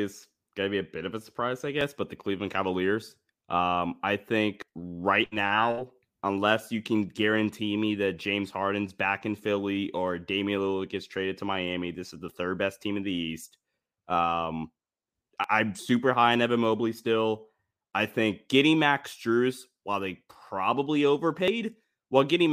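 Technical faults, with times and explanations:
1.81 s, 4.62 s, 15.44 s and 21.48 s, dropped buffer (overrun): each is a point where the speech jumps forward with no silence. Roughly 20 ms vanishes at 1.81 and 15.44 s, roughly 70 ms at 4.62 and 21.48 s, likely because the hardware overwrote samples before they were read.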